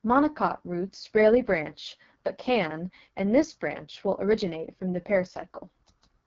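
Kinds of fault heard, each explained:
AMR wideband (HD Voice) codec: heavy coding, fitting the lowest 6.6 kbit/s mode, leaves the speech rough and raspy throughout, with nothing above 7.5 kHz.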